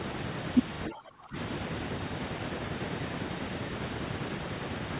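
From 0.89 s to 1.36 s the talker's level falls by as much as about 20 dB, with the sound thinning and breaking up over roughly half a second before recovering. The likely cause is speech suppressed in double talk: with both ends talking at once, the echo canceller could not separate the near talker from loudspeaker echo and attenuated everything. The dip is heard against narrowband audio that stops at 4 kHz, which fits a G.711 call path.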